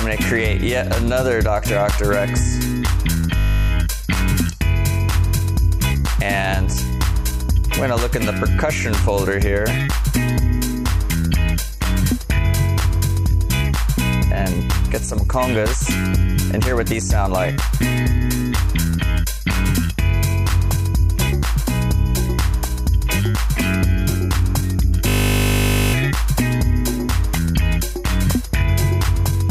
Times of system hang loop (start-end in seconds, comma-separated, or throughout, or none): 3.38-3.70, 25.08-25.94